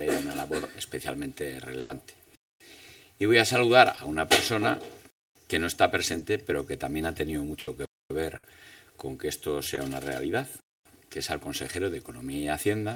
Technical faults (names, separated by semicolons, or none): channel delay (comb filtering); burst of packet loss; gap between chunks; short concealed packet loss